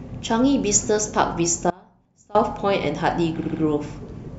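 Audio dropout to a faint residue, 1.70 to 2.35 s: the speech abruptly vanishes for 0.65 s, leaving only a faint leak roughly 25 dB down, likely a break upstream with the path still live.

Repeated frames, 3.39 to 3.60 s: a roughly 70 ms chunk replays three extra times, a rapid stutter, adding 0.21 s.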